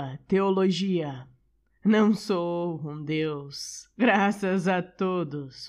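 Speech, with a system hang loop from 2.45 to 2.64 s, just before "um deus graças a": an 11.6 ms slice repeats exactly 16 times, fitting a 512-sample buffer, giving a steady 86 Hz buzz. Unlike a dropout, there is no silent gap, and the speech resumes with essentially nothing missing.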